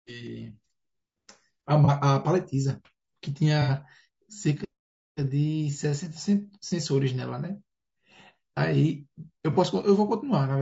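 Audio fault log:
Throughout: low-delay AAC compression. The speech sounds rough and grainy, with noise between the harmonics and a thin, synthetic top band. This likely comes from AAC-ELD at around 32 kbps. Its short frames resolve pitch harmonics poorly and spend bits quickly.
1.85–1.89 s, 3.62–3.70 s, 6.68–6.72 s, 9.53–9.57 s: AAC frame loss with concealment. Each is a brief smeared, noisy or phasey patch. The decoder rebuilt the missing audio from the last good spectrum. The longer 3.62 s patch points to two lost frames rather than one.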